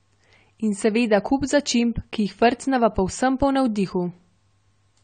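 Speech that sounds dull and smeared from start to finish, with a warbling, fizzy texture on sustained sounds and sibilants and nothing above 9 kHz. This is likely AAC compression, consistent with AAC-LC at around 32 kbps, lowering the cut-off and coarsely quantising the remaining spectrum.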